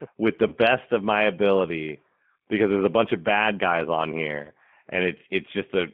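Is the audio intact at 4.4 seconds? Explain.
No. At 4.4 seconds, like everywhere else in this speech clip, you're hearing G.729 codec damage, and it runs the whole way through. The sound is squeezed into a phone band of roughly 150 Hz to 3.4 kHz, which fits an 8 kbit/s G.729A path. That codec rebuilds each 10 ms frame from a vocal tract filter, a pitch guess and a handful of pulses, so the speech comes out noticeably rough, buzzy and a bit synthetic.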